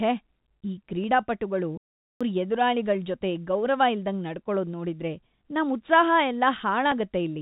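At 1.04 s a single sharp click cuts through the speech. This is dropped samples. A fraction of a millisecond of audio is missing, likely lost in transfer. The waveform jumps straight to a later value, and that step makes the click.

From 1.78 s to 2.21 s the speech stops dead for 0.43 s. This is a playback stall. The player likely ran short of data or its thread was held up, so the output fell silent. It resumes at "ಎದುರಾಳಿಗಳ್ ಜೊತೆ ಗೌರವ".

At 6.92 s a second click from dropped samples occurs. Again only a tiny sliver of audio is missing. It is far too brief to remove any sound, so only the sharp tick is heard. Across the whole clip, the narrow telephone band stops at 4 kHz.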